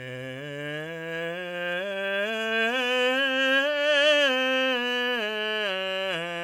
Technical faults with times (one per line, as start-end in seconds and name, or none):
0.00-6.44 generation loss